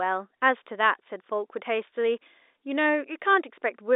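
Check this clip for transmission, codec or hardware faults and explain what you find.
No transmission, codec or hardware faults can be heard in this speech clip. It carries the narrow band of G.711 telephone coding, roughly 300 Hz to 3.7 kHz, with nothing above about 3.8 kHz.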